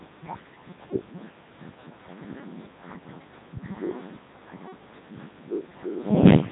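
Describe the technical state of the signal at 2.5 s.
At 2.5 s the speech is passing through the Codec 2 vocoder, as it does throughout. Rebuilt from pitch and envelope at about 3.2 kbit/s, it sounds robotic and buzzy, with nothing above 3.8 kHz.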